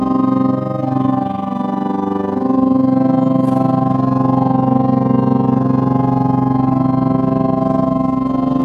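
From start to finish the sound carries overlap-add ripple: it was split into windowed frames and rejoined with an overlap whose windows don't add up to a steady gain, so loudness swells and dips once per frame, around 20 times a second, by about 11 dB. The result is a fast, rough flutter, a robotic tremolo. On a waveform the envelope shows regular scalloping at that rate; a spectrogram shows evenly spaced vertical banding across all frequencies.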